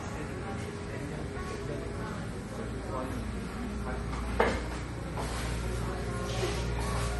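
Throughout, plainly audible MP3 compression: nothing above 11.6 kHz, watery swirling in the upper range, smeared attacks. A low bitrate near 36 kbps is the likely cause.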